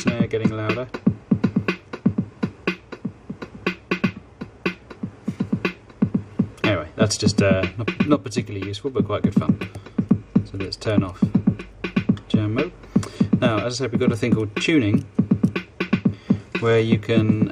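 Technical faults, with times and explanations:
No technical faults are present.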